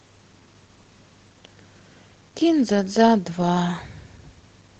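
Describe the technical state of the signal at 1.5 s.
Nothing is wrong with the signal at 1.5 s; the speech passes through intact at that moment.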